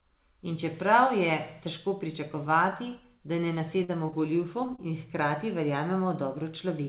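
Short concealed packet loss occurs just after "težko pričakovati da ne" at 3.84–3.90 s, then at 4.06 s and 4.10 s, and again at 4.66 s and 4.76 s around "in hkrati". Each lost stretch of 20 to 40 ms was filled by extending the preceding sound, so each one smears or wobbles briefly instead of dropping to silence the way an unconcealed gap would. All of this sits inside narrowband audio with nothing above 4 kHz.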